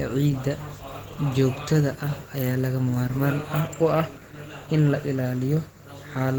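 Speech, carrying Opus voice compression throughout, and the damage is plainly audible. The sound points to a low rate around 16 kbps in hybrid mode: a linear-prediction coder handles the band below 8 kHz with coarsely coded excitation, giving a hoarse, slightly robotic grain, while a transform layer covers the top. On a spectrogram the band stays full, reaching about 20.3 kHz, but above 8 kHz it looks patchy and blocky, quantised in 20 ms frames.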